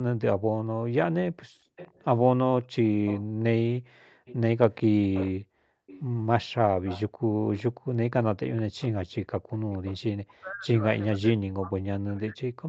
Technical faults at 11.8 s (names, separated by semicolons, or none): speech suppressed in double talk